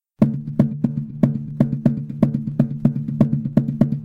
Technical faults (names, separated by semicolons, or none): clock drift buffer slips